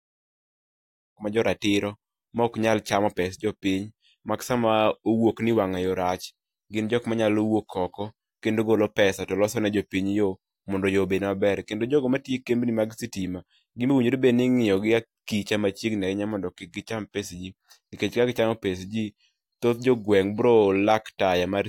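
No technical faults are audible.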